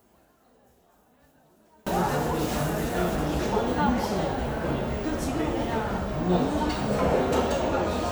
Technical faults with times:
0.00-1.87 one channel inverted

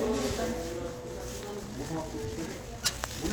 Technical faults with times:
1.57-3.32 time-stretched section

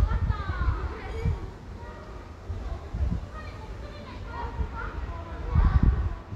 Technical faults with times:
none

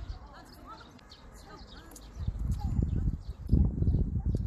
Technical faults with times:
0.95-1.01 damaged data in a compressed stream
3.44-3.49 damaged data in a compressed stream

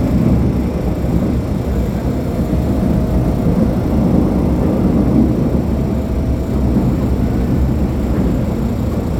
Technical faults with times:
none

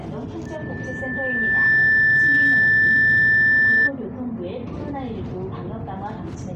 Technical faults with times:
0.46-3.92 loudspeaker feedback squeal

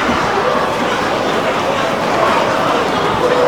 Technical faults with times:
0.00-3.48 audio read two samples at a time (double speed)

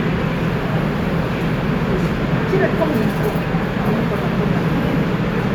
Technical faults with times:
none

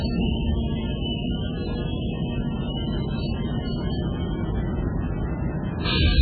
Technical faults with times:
0.00-6.21 MP3 compression

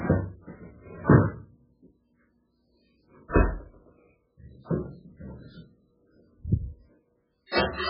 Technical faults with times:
0.00-7.90 MP3 compression

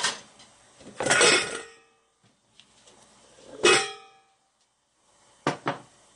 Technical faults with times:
0.00-6.15 MP3 compression

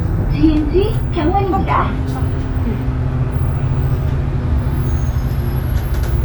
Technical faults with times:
none

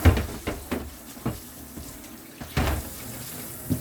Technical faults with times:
none

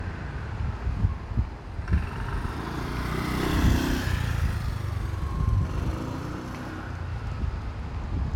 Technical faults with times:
0.00-8.36 generation loss

